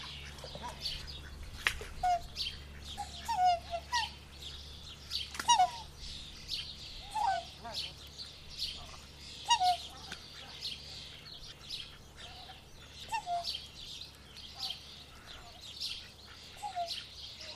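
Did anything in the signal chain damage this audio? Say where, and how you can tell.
Yes, at the codec decoding stage: compressed frames skipped at 1.01, 2.03, 2.97, 5.58, 7.90, 11.51 and 13.02 s. Each time the sound jumps ahead by between a tenth and a third of a second, whole 26.1 ms frames. Overlapping neighbouring frames smear the join into a soft blip, not the hard click or silent gap of a buffer dropout.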